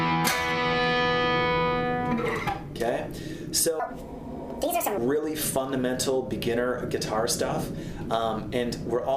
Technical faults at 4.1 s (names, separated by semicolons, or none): section at the wrong speed